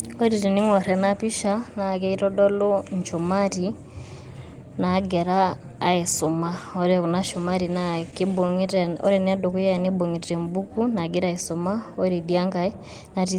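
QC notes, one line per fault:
7.91–9.90 s, repeated stalls (stutter): late packets drained the jitter buffer 21 times, each gap at most 15 ms bridged by continuing the last sound, so the speech drags and stutters.
10.19–10.70 s, jitter buffer slow-down: to rebuild its reserve, the receiver repeated pitch periods, adding 81 ms, so the speech runs at 86% speed with unchanged pitch and drawn-out sounds.
12.69–13.26 s, jitter buffer speed-up: with excess audio buffered, the receiver cut short pitch-period pieces, about 70 ms in total, so the speech runs at 110% speed, hurried at the same pitch.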